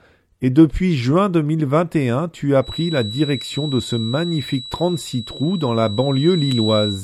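From 2.58 s, just after "tu as", a feedback whistle sets in and runs to the end of the clip: a thin, steady tone at 3.9 kHz sitting about 15 dB below the speech, swelling and fading slowly in level. The likely cause is a loudspeaker-to-microphone loop held right at the edge of feedback, sustaining one frequency without running away. On a spectrogram it appears as a single unbroken horizontal line at 3.9 kHz.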